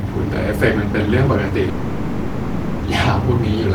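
From 1.69 to 2.84 s, the speech gives way to a fading buzz filling the 1.14 s gap. This is likely a long network dropout, with the missing audio never recovered.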